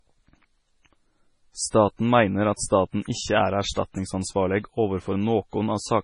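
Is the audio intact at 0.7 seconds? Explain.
No. MP3 compression runs through the whole clip, including 0.7 s. Nothing survives above 10.5 kHz, and weak frequency detail flickers between frames, giving the speech a watery, swirly sound with smeared attacks. The heavy damage likely comes from a low bitrate, around 24 kbps.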